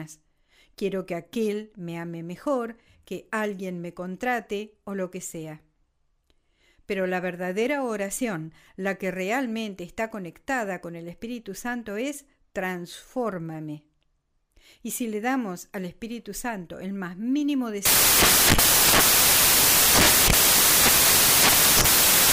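At 17.85 s the speech gives way to loud, harsh broadband noise that runs to the end of the clip at 22.32 s. These are samples built from the wrong bytes: the reader is assembling each sample from misordered or misaligned bytes, so the rapidly changing low-order bits end up as the most significant part of every value. The result is broadband hiss at high level.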